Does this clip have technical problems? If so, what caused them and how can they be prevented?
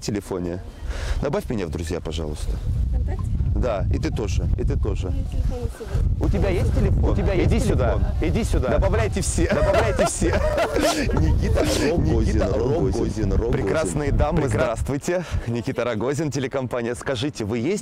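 Yes. From 6.24 to 14.68 s a doubled audio track is heard: a second copy of the sound runs about a second behind at roughly the same loudness, with no decay, cutting in and out abruptly. This is likely a second capture path or an edit leaving two offset copies; mute the duplicate route or remove the stray copy.

From 10.39 to 10.75 s there is processor overload crackle, a brief gritty tearing made of tiny hard-edged dropouts to silence. The processor missed a handful of buffer deadlines, fitting short buffers of about 5 ms. Prevent it with larger buffers or lower CPU load.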